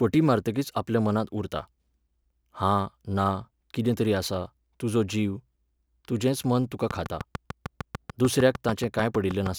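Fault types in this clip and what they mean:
Train of clicks: From 6.91 s to 9.47 s a steady ticking runs over the speech, about 6.65 clicks per second at an even pace, roughly twenty in all. Each click has much the same sharp shape and stands out around 10 dB above the speech, so the ticks carry through pauses as well as words. The regular repeating pulse likely comes from electrical interference from nearby equipment or a faulty connection or power supply.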